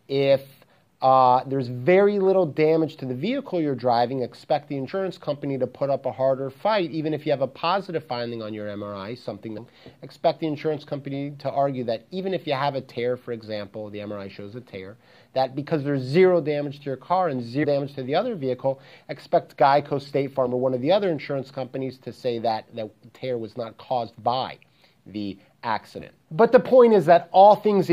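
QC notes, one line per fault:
4.88 s, 9.57 s and 17.63–17.65 s, damaged data in a compressed stream: corrupted bytes make the decoder misread frames and lose sync, producing three brief glitches of about 20 ms.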